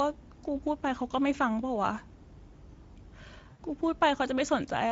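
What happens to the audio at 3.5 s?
Right around 3.51 s you hit VoIP packet loss concealed by the speech codec, running to about 3.60 s. A short chunk of the stream went missing, which fits roughly four 20 ms frames, about 80 ms of audio. The decoder papers over the gap by carrying forward its last pitch and filter state, fading the level each frame. So the speech smears into a buzzy tone or coloured noise that fades, and it stays weak or warped briefly after real packets resume.

Underneath that, the whole clip, including this moment, carries plainly audible Speex codec damage. Speex is a CELP codec, and at the rate this sounds like, something around 16.8 kbps, it doesn't have many bits to spend on the excitation signal. That leaves the speech with a noisy, hoarse texture. The concealment glitch sits on top of that constant coding grit.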